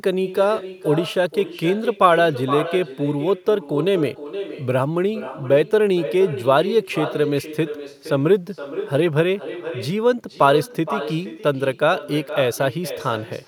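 An echo with no canceller runs through the whole of this speech recording: the far end's loudspeaker feeds its microphone and nothing strips that return. Every phrase is therefore shadowed about half a second later by a thinner copy sitting about 12 dB down.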